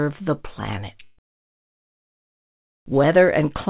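At 1.04 to 1.19 s, a burst of packet loss drops 140 ms; the receiver extends and fades the last sound, then speech skips ahead.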